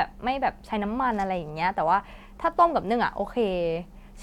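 At 2.07 s, compressed frames were skipped: the decoder dropped what sounds like a single frame of compressed data, either missing from the file or rejected as damaged, so about 20 ms of speech never plays. The gap fits one 23.2 ms frame. At the join, the speech jumps slightly ahead.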